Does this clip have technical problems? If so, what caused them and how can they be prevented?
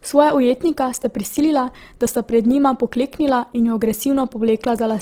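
Yes. Opus compression damage runs through the whole speech clip. The voice sounds grainy and rough, with a noisy, sandy texture. The highs stay present, reaching about 20.3 kHz, but they are filled with noise rather than detail. The likely cause is the encoder's music mode starved of bits, which fits a rate near 16 kbps. It rebuilds each band's energy by folding or noise fill, so little goes missing, but everything roughens. To prevent it, encode speech at higher bitrates or in Opus's speech mode.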